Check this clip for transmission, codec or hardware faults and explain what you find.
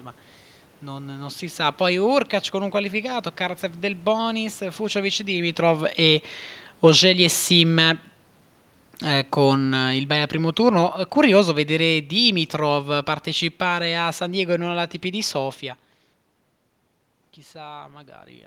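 Three automatic gain control faults show up in this speech recording: two gain drops and one gain rise, all from the gain control steering its level rather than from the codec or the link.

Automatic gain falling occurs from 6.71 to 7.91 s, a cut of about 3 dB, and again from 9.04 to 14.81 s, about 8 dB. Each time the control judged the input too loud, or its background noise too strong, and eased its gain down. The level sinks gradually, and the room noise sinks with it. That shared sag separates it from the talker moving around 5 s and 15.5 s, where only the voice changes.

Automatic gain rising runs from 7.0 to 7.97 s, overlapping the first drop and lifting the level by about 4 dB. Here the control judged the input too quiet and pushed gain up over roughly a second, so voice and background swell together. A talker leaning closer would raise the voice alone. Falling and rising overlap for most of that second.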